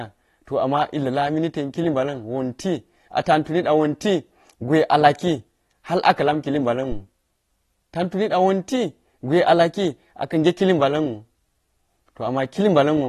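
Throughout the speech, the signal has likely been squeezed by AAC compression at a low bitrate, which fits AAC-LC near 32 kbps. Nothing survives above 12.4 kHz, and coarse quantisation leaves plainly audible damage: a dull, smeared tone with fizzy, warbling sibilants.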